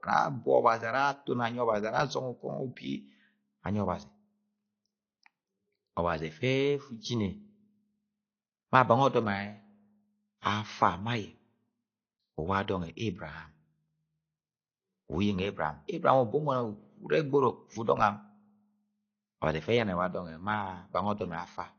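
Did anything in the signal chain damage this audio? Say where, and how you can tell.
Yes: the speech sounds dull and warbly throughout, with nothing above 6.5 kHz. The likely cause is AAC compression at the codec stage, starved near 32 kbps.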